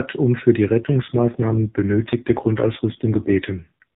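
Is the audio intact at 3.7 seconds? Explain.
No. At 3.7 seconds you're inside an AMR rate drop that kicks in at 0.80 s, right after "um für die", and runs to the end of the clip. The AMR narrowband codec falls from 12.2 to 4.75 kbps, shifting bits from the speech model to error protection, the way a network does on a weak radio link. The bandwidth stays the same and there's no gap, but the voice turns rougher, buzzier and more synthetic.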